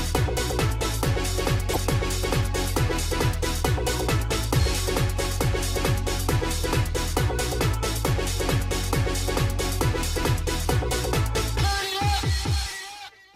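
At 1.71 to 1.77 s, damaged data in the compressed stream makes the decoder lose frame sync, producing a brief glitch of about 60 ms before the sound resumes.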